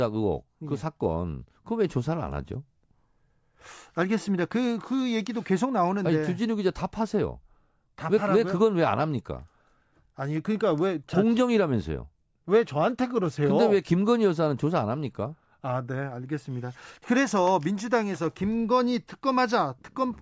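No technical faults are audible anywhere in the speech recording.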